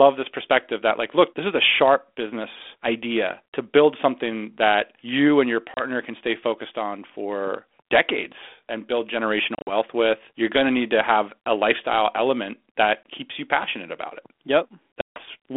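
Packet loss on an ADPCM call drops stretches of the stream, and the decoder's adaptive predictor and step size drift from the sender's, so each hard-edged silence ends in a brief, slightly distorted return before settling. It happens at 5.74 to 5.82 s after "that you and your" (30 ms lost), at 9.55 to 9.73 s after "for decades and build" (100 ms scattered over 120 ms, about ten packets), at 13.04 s before "keeps you passionate about", and at 15.01 to 15.21 s (150 ms lost) over the band-limited 32 kbit/s G.726 line.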